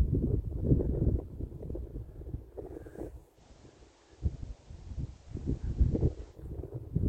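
A hybrid receiver lost its digital stream and blended to FM from 3.32 to 6.40 s: digital radio blending to analogue brings faint hiss and a level shift of about 2 dB.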